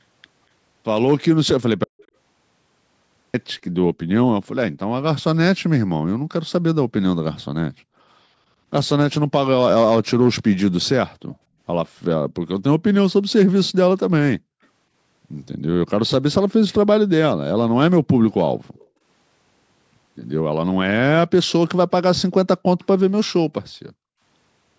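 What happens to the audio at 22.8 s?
A likely echo leak, the far end's canceller letting its loudspeaker pickup slip back, puts a very faint copy of the speech, delayed by 250 ms, at 22.80–22.85 s.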